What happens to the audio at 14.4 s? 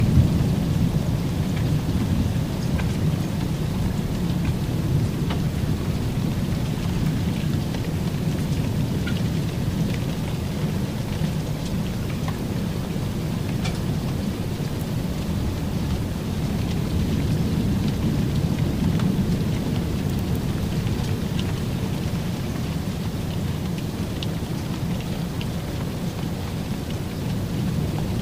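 At 14.37 s, compressed frames are skipped: about four frames, roughly 40 ms of audio, which fits 10 ms frames, never play, so the sound jumps ahead. The join is a brief smeared blip or a hard click, seen as a waveform discontinuity and a thin vertical broadband line on a spectrogram.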